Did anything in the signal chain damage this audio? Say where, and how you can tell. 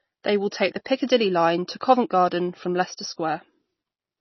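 Yes. Throughout, the speech sounds watery and dull, with nothing above 6 kHz. The likely cause is heavy MP3 compression at the codec stage, fitting a bitrate near 24 kbps.

At 0.85 s, after "will take the", a brief hiss comes just before an attack. This is pre-echo: the codec spread quantisation noise across the block, into the quiet moment ahead of it.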